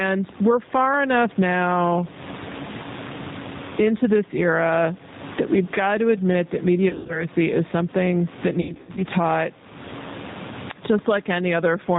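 Throughout the recording the level pumps. The room background, sitting about 33 dB below the speech, rises audibly in the pauses and drops away as soon as the talker speaks, with a swing of roughly 20 dB. Loud and quiet passages sound pressed toward one level. This is gain pumping, likely caused by input gain set far too high for the microphone, with a fast limiter or compressor clamping down on each loud syllable and releasing in the gaps.

The whole clip also carries the sound of the G.729 codec at 8 kbit/s. Everything above 4 kHz is missing, so sibilants are dull and the top end is closed off. The speech is rebuilt from a vocal tract filter and pitch model with a few pulses per frame, and that gives it a plainly audible rough, slightly synthetic grain. The pumping background warbles instead of sounding like smooth noise.

Straight after "to admit that", from 6.89 to 7.26 s, there is VoIP packet loss concealed by the speech codec. 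About 140 ms of audio is missing, scattered across 200 ms, and the longest gap is 80 ms. The loss fits seven 20 ms packets. The decoder fills each hole by repeating its last pitch and filter at falling gain, which produces a short buzzy, smeared stretch. The voice then stays weak and distorted until about 7.26 s while the predictor rebuilds.

A second, heavier burst of the same packet loss runs from 8.61 to 9.02 s. This time about 240 ms is lost, scattered over 360 ms, again with runs of at most 80 ms, which fits twelve lost 20 ms packets. The concealment repeats several times in quick succession, so the speech breaks up into fading buzzy fragments separated by briefly recovered sound. It stays thin and distorted until around 9.02 s.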